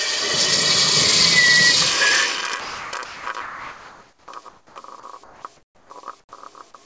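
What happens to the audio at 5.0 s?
Right around 5.00 to 5.03 s, about 30 ms of the sound is swapped for a flat burst of comfort noise before it picks back up. That's likely sound dropped by the voice detector, which briefly mistook the signal for background and paused sending while the receiver filled the gap.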